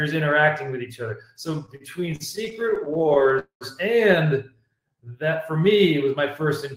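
The audio carries three network playback faults in quick succession. From 1.47 s to 3.38 s there are repeated stalls (stutter): the sound catches and drags 29 times, with the longest hold at 43 ms and roughly a fifth of that stretch, 358 ms in all, filled in by the receiver. Packets were arriving late or slower than the playout rate, so the jitter buffer kept running dry. Each time, the receiver extended the last sound until data arrived, which is why nothing is lost even though the passage sounds halting. Immediately after, from 3.39 s to 3.64 s, comes a call audio freeze: the sound hangs and carries on as a fading continuation, then drops to silence for about 110 ms before resuming where it stopped. The 215 ms gap this inserts matches a 215 ms jump in playout delay, which points to packets likely held up in transit long enough to empty the buffer completely. No content is skipped; the gap is simply added. 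From 4.50 s to 5.78 s a jitter buffer slow-down follows. Playback runs at 88% speed with the pitch unchanged, stretching the passage by 154 ms. The receiver was rebuilding its reserve by repeating single pitch periods and fragments of pauses, which gives the drawn-out quality in that span.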